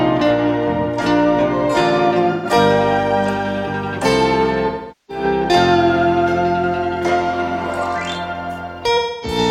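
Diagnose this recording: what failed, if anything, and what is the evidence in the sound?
Smeared, phasey, noisy patches replace the sound at 2.31 to 2.47 s, 4.66 to 5.24 s and 8.97 to 9.38 s. This is AAC frame loss with concealment at the codec stage: the decoder rebuilt about 128 ms, 427 ms and 256 ms of missing frames from the last good spectrum.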